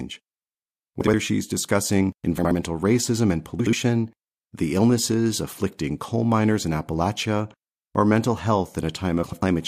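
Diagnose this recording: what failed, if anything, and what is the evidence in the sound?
A network or decode-buffer stage delivered frames out of order: two adjacent blocks of frames were swapped and decoded in that order. Each swap is heard as a garbled flutter, with no time lost. It occurs at 1.01–1.14 s (just before "she's discussing"), 2.38–2.52 s (between "she's discussing" and "racism and"), and 3.60–3.73 s (after "racism and"), each exchanging two 64 ms blocks. At 9.23–9.43 s two 96 ms blocks are exchanged.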